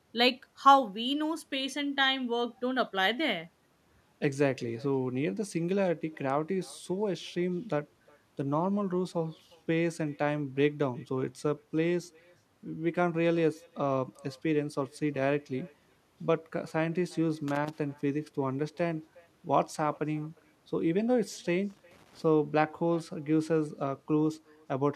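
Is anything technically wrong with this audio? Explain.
Yes, two faults are present.

Echo with no canceller runs through the whole clip. The far end is playing the call over a loudspeaker, its microphone picks that sound up again, and nothing strips it out before it returns across the network. Each phrase is trailed by a faint copy roughly 400 ms later, about 28 dB below the direct speech. It sounds thinner than the original, a quiet shadow behind everything said.

Loose connector crackle occurs twice, from 17.48 to 17.79 s and from 21.70 to 22.22 s. A worn or dirty contact somewhere in the signal path is rapidly making and breaking as it moves, so the audio is chopped on and off many times in quick succession. Each episode is heard as a short, irregular burst of scratchy crackle, lasting about 0.3 s the first time and about 0.5 s the second.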